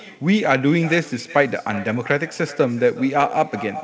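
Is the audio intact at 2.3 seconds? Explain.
No. Echo with no canceller runs through the whole clip, including 2.3 s. The far end's loudspeaker output reaches its microphone and returns unremoved, so each sound is trailed roughly 0.4 s later by a thin copy about 18 dB quieter.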